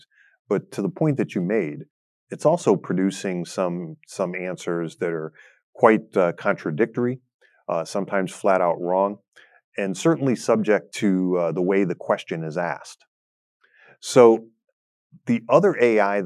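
Nothing in this recording of speech stands out as a technical fault, so there's nothing to flag here.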